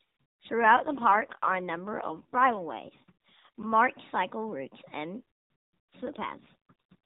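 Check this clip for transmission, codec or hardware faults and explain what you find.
Two AMR rate drops affect this speech, carried over an AMR-NB narrowband mobile link. The first runs from 0.61 to 3.74 s, ending just before "cycle routes and"; the second from 6.02 to 6.95 s. In both, the voice turns buzzier and more synthetic, which fits the codec stepping down from 12.2 to about 5.9 kbps to free bits for error protection. On a spectrogram the band stays capped below 4 kHz with no gap, but harmonics blur; the waveform stays continuous.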